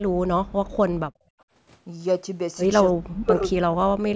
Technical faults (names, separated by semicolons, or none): background gated by the echo canceller; echo leak; speech suppressed in double talk